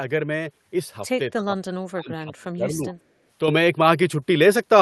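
From 1.3 to 2.93 s the speech dips, falling about 25 dB. Likely cause: speech suppressed in double talk by the echo canceller.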